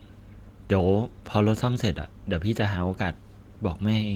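No faults are audible in the speech; the Opus compression keeps the band open to about 20.2 kHz, which points to hybrid mode at around 20 kbps.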